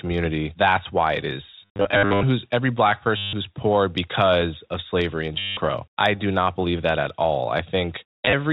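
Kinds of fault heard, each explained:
Packet loss with last packet repeated: at 1.63 to 2.23 s (scattered, longest gap 70 ms), 3.17 to 3.33 s, 5.39 to 5.57 s and 8.25 to 8.33 s, lost audio is filled by replaying the previous chunk, giving robotic stutters with a buzz near 100 Hz, which fits 10 ms packets.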